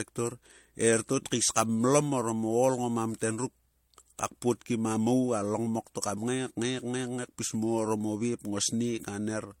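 All the way through, the speech carries a mix of artefacts that don't belong to one codec, most likely transcoding between lossy codecs, something like an HE-AAC encode at a rate that fits about 40 kbit/s, later re-encoded as MP3 at what sounds like 64 kbit/s. The MP3 stage wastes bits re-coding the first encoder's artefacts and adds its own, so the two textures pile up. Nothing survives above 16.6 kHz.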